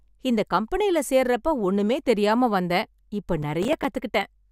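From 3.43 to 3.85 s the speech breaks into processor overload crackle. The processor could not finish its small audio buffers in time, and it missed several deadlines in quick succession. Each missed buffer dropped out to silence with hard edges. The gaps are very short, which points to buffers of around 5 ms. About seven of them scatter across this stretch. Together they sound like a gritty, tearing crackle over the speech. It stops once the load eases.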